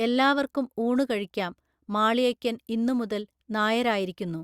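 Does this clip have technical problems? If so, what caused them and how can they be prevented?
No, no technical faults here.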